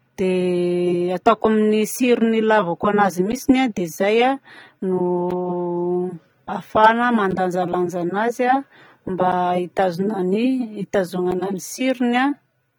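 Throughout the speech the sound is dull and smeared, with a fizzy, warbling texture on sibilants and held vowels. That is likely AAC compression, with damage plainly audible and consistent with AAC-LC at about 32 kbps. Unlike a simple low-pass filter, the loss shifts and bubbles rather than sitting as a steady cut.

From 3.32 s to 11.32 s come periodic USB or driver dropouts: about five short silences of roughly 10 ms, spaced every 2.0 s, each heard as a tick during signal. The strict regular spacing marks a scheduled stall on the bus or driver, not random interference clicks.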